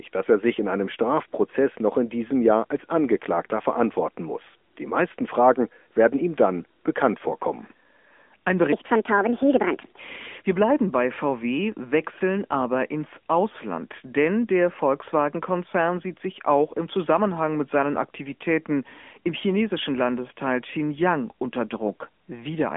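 From the start to the end of the clip, the speech carries the sound of an AMR narrowband mobile codec. Nothing passes above 3.7 kHz, and the usable band sits between about 250 Hz and 3.5 kHz, giving the thin, boxy quality of a phone line. The codec damage is plainly audible: the voice is rebuilt from a vocal-tract model excited by sparse pulses, so it turns buzzy and synthetic. The degree of artefacting points to a mid-rate mode, around 10.2 kbps.

From 8.73 s to 9.99 s, a section plays at the wrong speed, running 1.64 times faster than the surrounding audio. Because speed and pitch move together, the voice jumps up by close to ten semitones and sounds hurried and chipmunk-like. It drops back to normal rate and pitch at 9.99 s. The likely cause is that this stretch was played or edited against the wrong clock rate.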